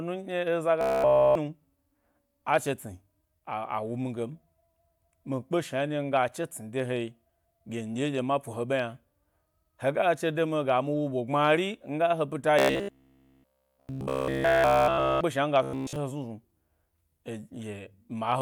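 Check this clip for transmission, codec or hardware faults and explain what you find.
Robotic sound from repeated short buffers occurs three times in this speech: 0.81–1.38 s, 12.59–15.22 s (ending just before "shna mi"), and 15.63–15.96 s (right after "shna mi"). The speech becomes a rigid metallic buzz at 66.8 Hz that still loosely tracks the words. The likely cause is incoming audio arriving too slowly, so playback loops a roughly 15 ms buffer. This fits the buzz period, and essentially all of the sound in those spans is repeated rather than new.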